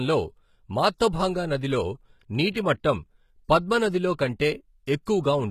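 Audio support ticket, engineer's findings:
Likely HE-AAC compression throughout: codec keeps only the lower spectrum and rebuilds the treble by spectral band replication, copying lower bands upward. Nothing above 14.9 kHz. Damage plainly audible; sibilants gritty and metallic, consistent with about 20 kbps.

Pre-echo, 2.53 to 2.56 s: transform codec spread quantisation noise over the whole block, including the quiet stretch before a sharp attack. About 23 ms of hiss precedes the onset; the attack itself sounds softened and smeared.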